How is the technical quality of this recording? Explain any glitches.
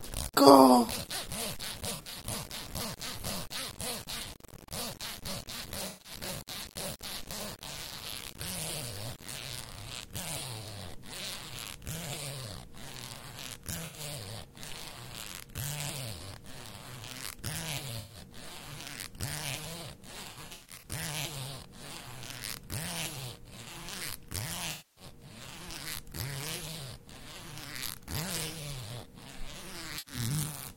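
Quality is compromised by two faults in this everyday-sound recording: grainy distortion over the opening stretch and repeated dropout patches throughout.

Low bit depth without dither, 0 to 9.45 s: the audio sounds coarse and gritty, with distortion that tracks the sound and sits only around 15 dB below it. The likely cause is rounding to roughly 8-bit resolution with no dither, so the error stays correlated with the signal.

AAC frame loss with concealment at 1.94–2.18 s, 5.87–6.12 s, 13.85–13.99 s, 17.99–18.17 s, 20.31–20.88 s, 24.71–25.04 s and 29.98–30.14 s: the decoder patched missing frames from the previous spectrum. The 85 to 150 ms gaps sound smeared and phasey. At 20.31 s, about 277 ms of scattered losses cause repeated disturbances, and the 256 ms loss at 24.71 s dips before recovering.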